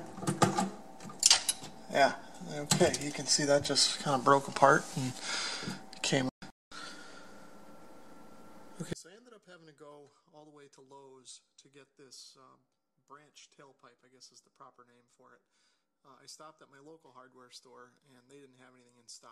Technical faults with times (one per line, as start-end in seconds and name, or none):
8.93-19.32 one channel inverted